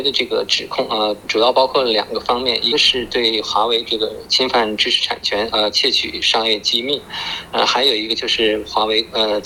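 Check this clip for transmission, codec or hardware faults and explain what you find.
One codec fault turns up: damaged data in a compressed stream at 2.71 s. Corrupted bytes cause the decoder to misread a frame and lose sync, producing a brief disturbance lasting about 18 ms; a spectrogram shows a short broadband smear, the waveform a discontinuity.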